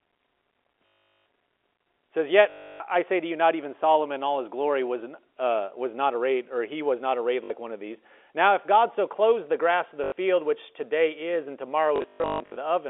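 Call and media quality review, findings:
Packet loss with last packet repeated, five spots:
0.93 s: about 400 ms lost, robotic stutter as the last packet replays; buzz fits 20 ms packets (50 Hz).
2.5–2.8 s: 300 ms, same buzzy repeat.
7.44–7.5 s: short stutter between "he was not arrayed" and "one of these".
10.04–10.12 s: buzz after "the grass of the", before "which today is and".
11.96–12.56 s: scattered loss after "which today is and", longest run 140 ms.
Likely the jitter buffer/PLC hold-last-frame path. G.711 narrowband line band (300 Hz–3.4 kHz) is expected.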